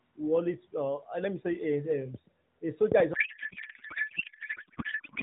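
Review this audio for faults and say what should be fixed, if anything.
A loud pop, two sharp clicks between 2.92 and 3.02 s, well above the speech, which continues underneath. These are likely a plug, switch or static transient rather than dropout clicks, which would remove sound instead of adding to it.

A codec payload misread runs from 3.14 s to the end. The narrowband AMR speech turns into garbled warble that barely tracks it, which fits octet-aligned AMR frames being parsed as bandwidth-efficient. Heavy compression would thin or buzz the speech but still follow it.

To prevent these, secure connections and grounding, and make both ends negotiate the same AMR payload format.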